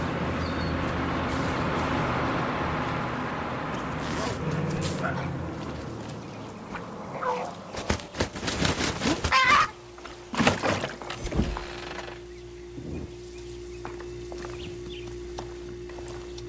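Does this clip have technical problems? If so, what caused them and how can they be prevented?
No, there are no technical problems to fix here.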